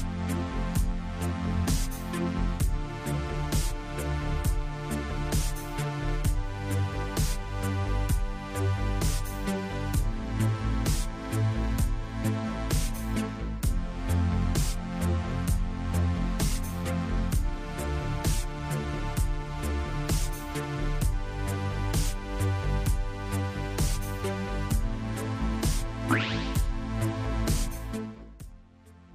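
Zipper noise appears from 27.64 to 28.68 s, where the level falls by roughly 20 dB in unsmoothed steps of about 2 dB, around ten per second, each producing an audible tick.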